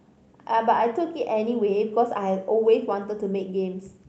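No technical faults can be heard anywhere in the speech. It has clearly passed through a working call path whose codec rolls off the highs at about 8 kHz and leaves its usual coding texture, which fits an Opus stream at a moderate bitrate.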